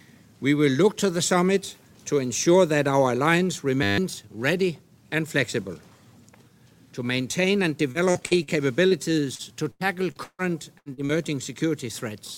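At 3.83 s the audio collapses into a steady 100 Hz buzz for about 0.15 s. That is a system hang loop: the computer or driver froze while the hardware kept replaying one 10 ms slice of its ring buffer fifteen times, so roughly 150 ms of real sound never plays. From 7.91 to 8.50 s and again from 9.35 to 10.42 s the sound turns choppy. This is repeated packet loss (robotic sound), with four gaps in each stretch patched by extending the previous sound. The first stretch's longest hole is 43 ms and about 27% of it is filled in; the second's longest is 154 ms and about 30% is concealed. Brief smears or wobbles at 8.87, 10.94 and 11.05 s are short concealed packet loss, where each 40 ms hole was bridged by continuing the last sound before blending back into the real audio. Between 10.79 and 10.89 s the sound holds and fades, then resumes further along. That is a burst of packet loss: 80 ms arrived too late or not at all, and the receiver stretched the last sound while turning it down.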